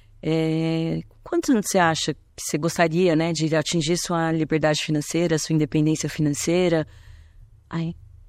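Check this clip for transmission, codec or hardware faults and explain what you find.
One codec fault runs through the whole clip: the speech has plainly audible damage, most likely from MP3 compression at a low bitrate, with the sound pointing to something around 64 kbps. Short of bits, the encoder has dropped quiet spectral detail that flickers in and out between frames. The voice comes across watery, sibilants turn swirly and metallic, and consonant onsets lose their crispness.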